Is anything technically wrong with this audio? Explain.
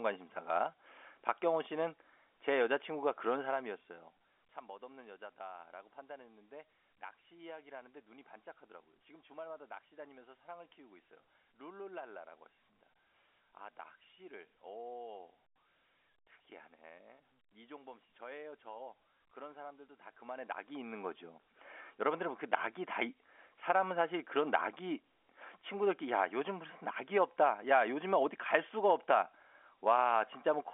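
No, this is telephone-band speech with nothing above about 3.7 kHz, as expected of a G.711 line, and its gradual level moves are deliberate fader-style changes, not faults.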